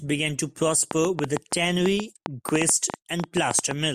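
Speech with a train of clicks from 0.91 to 3.72 s, after "began to": about twenty irregular pops, 7 per second, appearing as vertical spectrogram lines and waveform spikes, likely from electrical interference.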